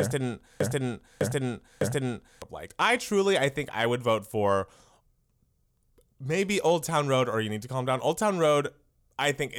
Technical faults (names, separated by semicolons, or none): broken-record loop